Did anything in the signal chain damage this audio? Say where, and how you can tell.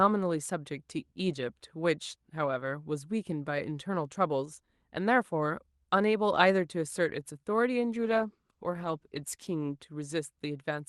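Yes, a call bitrate drop at the network and codec stage: from 7.98 to 9.81 s the speech turns rough and muffled, which fits Opus falling from 32 to about 15 kbps.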